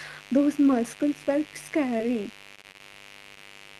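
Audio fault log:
throughout, mains buzz: a steady, raspy buzz sits under the speech the whole way, about 20 dB below it. That's switching spikes getting in twice per 50 Hz mains cycle, via a dimmer, rectifier or missing shield. The sharp edges throw off 50 Hz harmonics stacked well up into the kilohertz range, which is why it rasps rather than hums. You hear it in every pause, and it never lets up.
1.97 to 2.01 s and 3.35 to 3.38 s, short concealed packet loss: two tiny holes, about 20 ms of audio each that never reached the decoder in time. The first comes right after "muscles were". The receiver papered over them by stretching the last bit of sound and blending back into the real signal, so instead of a gap you get a quick smear.
2.55 to 2.81 s, repeated packet loss (robotic sound): here the losses bunch up. Four gaps land inside about a quarter second, the longest around 23 ms, and roughly 80 ms goes missing in total, so close to a third of that stretch is patched rather than real. 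Each patch reuses the previous sound, and the next hole hits before things settle. That's what gives it the choppy quality with bits dropped out.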